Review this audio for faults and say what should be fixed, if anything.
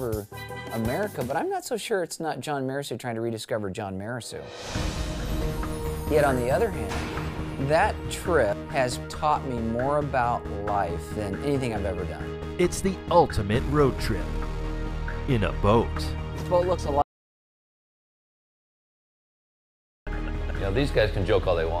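Audio dropout to silence from 17.02 to 20.07 s: the sound cuts to silence for about 3.05 s, with no room tone, likely from a lost input while recording continued. Secure the input connection and monitor levels during capture so the recording doesn't keep running over a dead input.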